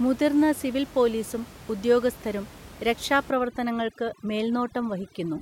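From 3.30 s to the end, overdone noise removal makes the room noise, about 20 dB below the speech, drop and break up into twinkling specks. Quiet speech detail vanishes with it. Unlike codec smearing, these losses follow the noise floor.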